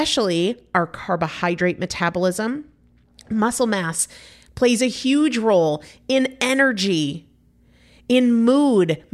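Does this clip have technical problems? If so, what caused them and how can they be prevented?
Yes. De-emphasis applied wrongly affects the speech from 0.54 to 3.99 s, ending just before "plays a huge role". A treble-cutting de-emphasis filter was run on audio that had no matching pre-emphasis, or was run a second time, so the response rolls off smoothly toward the top, sitting about 8 dB lower at 10 kHz than at 1 kHz, and that stretch sounds dull and muffled. To prevent it, apply de-emphasis only where pre-emphasis is confirmed, and only once in the chain.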